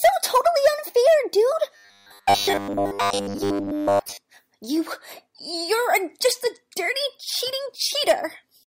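From 1.74 to 4.17 s the audio becomes a rigid 100 Hz buzz. This is robotic sound, likely from repeated short buffers of about 10 ms replacing most real audio.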